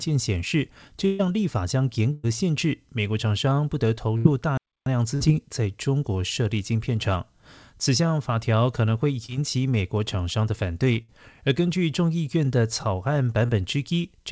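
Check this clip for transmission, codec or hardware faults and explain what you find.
Yes, there's a fair bit going on: repeated bursts of packet loss, one playback stall and two short concealed losses, all on speech that's come through a wideband call codec with nothing above 8 kHz, which fits G.722 at 64 kbps.

Burst of packet loss, at 1.06–1.21, 2.13–2.25, 4.17–4.27, 5.15–5.22 and 11.02–11.10 s. Several packets in a row arrived too late or not at all, so the receiver stretched the last sound and faded it. You hear a held buzz or fading hiss, then the speech jumps ahead, with about 140, 100, 80, 60 and 60 ms gone.

Playback stall, 4.57–4.86 s. The output goes dead for about 0.29 s mid-flow and then carries on. It's likely the player running dry or its thread getting blocked, which leaves a clean hole rather than a smeared-over one.

Short concealed packet loss, at 9.26–9.30 and 13.46–13.50 s. 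About 20 ms of audio missed the decoder each time, and the gap was patched by extrapolating from the preceding sound and then blending back in. It comes across as a quick smear or wobble rather than an obvious dropout.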